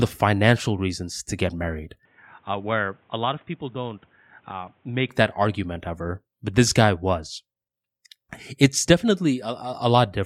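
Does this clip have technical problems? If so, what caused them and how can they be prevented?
Yes. Input switched to a poorer device from 2.05 to 5.09 s, after "reasons to get married": likely another microphone took over, cutting everything above 3.8 kHz, dropping the level by about 10 dB and adding faint new noise. Locking recording to one input device and disabling automatic switching prevents it.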